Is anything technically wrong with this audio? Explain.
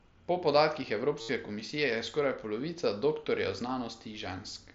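Yes, there's a short patch of concealed Bluetooth headset packet loss from 1.21 to 1.29 s. For about 75 ms the receiver fills the gap by repeating the best-matching bit of recent waveform, so you hear a buzzy held tone at full level, then a slight warble as the real speech comes back. That length fits roughly ten lost headset packets. The wideband mSBC link itself is working normally.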